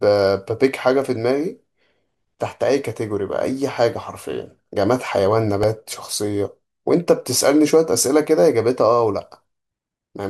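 At 5.63 s there's a repeated buffer: fresh audio didn't arrive in time, so the device replayed its last tiny 1.33 ms chunk two extra times. That fits a 64-sample buffer. It's too short to stutter, so it lands as a quick click or brief buzz, with a few milliseconds of speech lost.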